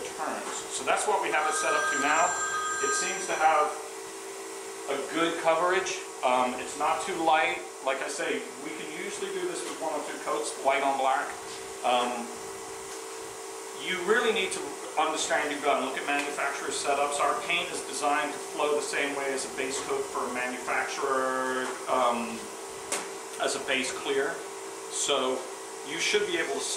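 From start to finish there is computer activity noise: a thin buzz with a chirping, scratchy edge, pulsing at around 1 kHz and sitting roughly 30 dB below the signal. It rises and falls with the machine's workload rather than with the audio itself. Changing load on the processor, graphics card or mouse pushes current through a ground path shared with the audio circuitry, and that fluctuating ground leaks into the signal.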